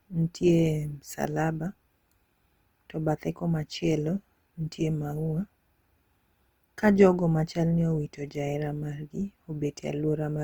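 Throughout the speech, a rough, grainy texture clings to each syllable. Voiced sounds turn noisy rather than swirling as MP3 would, and content still reaches up to 20.1 kHz. This is likely Opus compression in CELT mode, noise-filling starved bands at a rate that fits 24 kbps.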